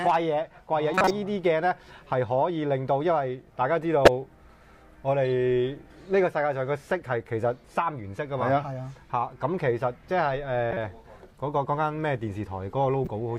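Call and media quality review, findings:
Corrupt frame decoded at 0.94–1.11, 4.05–4.08, 10.71–10.77 and 13.05–13.08 s: decoder played bit-damaged frames, causing chirps and noise bursts. Spectrogram shows brief, frame-long blocks of misplaced energy.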